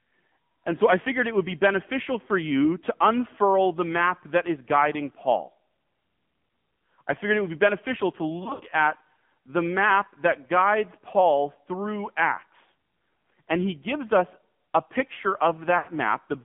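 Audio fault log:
Throughout: AMR narrowband mobile codec. The audio is confined to roughly 150 Hz to 3.5 kHz, so everything above it is missing and the speech sounds thin and telephone-like. The codec rebuilds the voice from a vocal-tract model excited by a few pulses per subframe, and at this low a rate it leaves a plainly audible buzzy, synthetic edge. That fits the 7.4 kbps AMR-NB mode.
8.44–8.62 s: lost AMR speech frames, after "would be beneficial to" and before "at the map that". About 100 ms of speech goes missing, scattered over 160 ms, with the longest gap 60 ms. The decoder fills each gap by repeating the last good pitch and tract settings at falling gain, so the sound smears and dips.
15.78–15.90 s: lost AMR speech frames, after "gives us a picture". A 100 ms gap, which fits five 20 ms frames, is bridged by the same fading repetition, heard as a drawn-out, weakening stretch.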